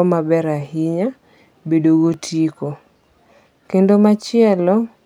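A speech clip with one block of digital silence at 2.14 s. The sound drops to silence for about 2.9 ms and returns with no fade. At that length it is heard as a tick. The gap fits a 128-sample buffer the program did not fill in time.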